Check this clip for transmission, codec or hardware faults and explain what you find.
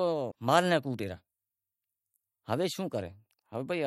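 One fault, at 0.30 to 0.33 s: a broken MP3 bit reservoir is the likely cause. Dropped frames left the next one borrowing data from the wrong bytes, so the speech skips ahead with a brief corrupted stretch of about 26 ms, roughly one 26.1 ms frame.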